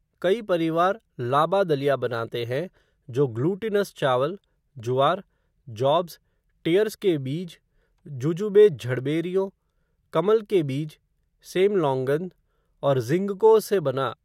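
No technical faults can be heard anywhere in the speech recording. At no point does anything in the signal chain stand out as having gone wrong.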